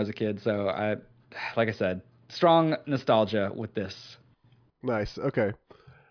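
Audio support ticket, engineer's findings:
No faults found in recording.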